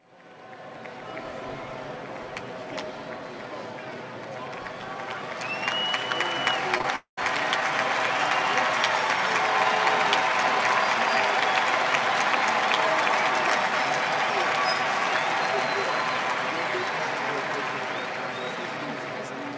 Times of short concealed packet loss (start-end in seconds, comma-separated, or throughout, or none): 6.78-6.86